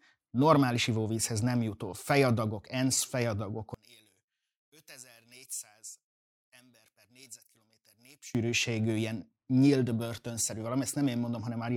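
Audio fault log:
3.74 to 8.35 s, one channel inverted: the speech suddenly falls by about 22 dB, likely because one stereo channel's polarity is reversed so shared centre content cancels in mono. Unlike a simple gain drop or dropout, only the shared, centred content cancels while any channel difference remains.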